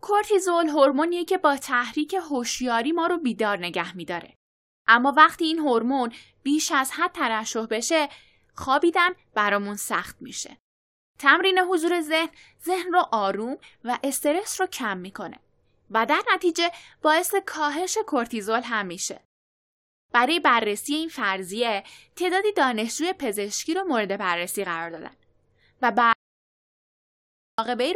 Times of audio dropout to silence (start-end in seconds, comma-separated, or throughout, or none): 26.13-27.58